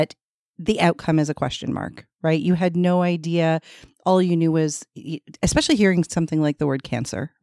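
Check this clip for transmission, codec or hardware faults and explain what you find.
Nothing to flag here; I listened through the whole speech clip and didn't pick up any transmission, codec or hardware trouble worth pointing out.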